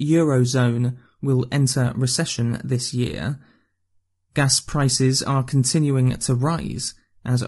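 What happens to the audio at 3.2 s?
At 3.2 s the speech carries the same plainly audible low-delay AAC compression that runs through the whole clip. The voice sounds rough and grainy. Noise fills the gaps between the harmonics, and the top band sounds dull or synthetic. The likely cause is AAC-ELD, the low-delay codec of video calls. Its short frames resolve pitch harmonics poorly, and the damage fits a bitrate near 32 kbps.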